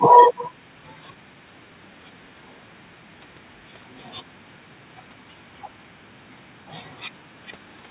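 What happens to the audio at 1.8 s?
Nothing goes wrong at 1.8 s: the speech there passes through intact, carried over a call path whose narrow band, with nothing above 4 kHz, fits G.711 mu-law coding at 64 kbps.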